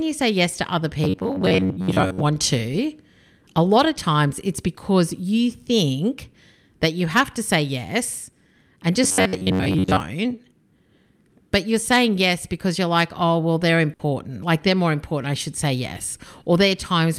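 From 1.04 to 2.22 s and again from 9.04 to 10.00 s, the speech turns into a rigid metallic buzz near 94 Hz. This is robotic sound from repeated short buffers, likely from roughly 11 ms chunks repeated to cover late audio, about half of the first stretch and most of the second. At 13.93 to 14.07 s, a burst of packet loss leaves a held, fading 60 ms fill before speech resumes with 60 ms missing.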